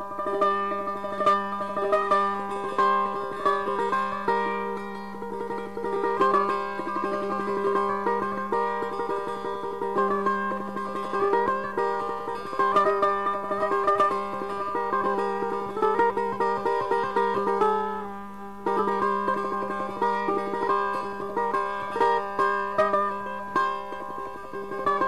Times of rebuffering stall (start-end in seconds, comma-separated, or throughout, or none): none